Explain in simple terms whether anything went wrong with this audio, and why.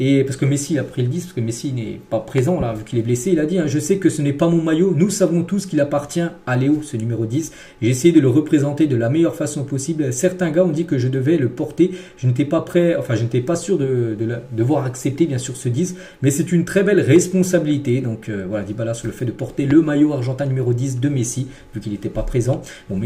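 Loud pops interrupt the sound: a double pop between 2.38 and 2.64 s and a single one at 19.71–19.73 s, likely from a sudden electrical jolt such as a plug or switch.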